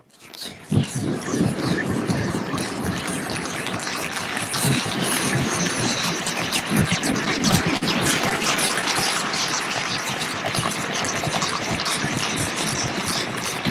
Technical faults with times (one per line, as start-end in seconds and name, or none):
6.99-7.83 repeated stalls (stutter)
8.29-8.85 repeated stalls (stutter)